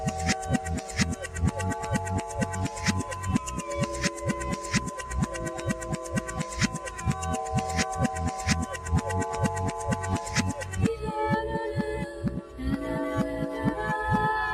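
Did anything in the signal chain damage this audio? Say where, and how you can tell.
Yes. The damage comes from the call-processing stage, where a noise suppressor built for speech was left running on this sound. It treats sustained, steady content as noise, so level swings by about 5 dB across the whole clip as the gain rides up on onsets and back down as material settles. On a waveform the envelope breathes and pumps. On a spectrogram, steady bands and decaying tails look patchy and faded while transients stay dense.

The sound cut by the noise suppressor is clearest in three dips: 6.25 to 6.53 s and 6.73 to 7.01 s, each bottoming out about 5 dB down, and 12.42 to 12.59 s, about 6 dB down. Each dip lasts roughly a fifth of a second or less. They show as short notches in the waveform envelope and as brief vertical pale stripes across the spectrogram, where sustained energy is pulled down before recovering.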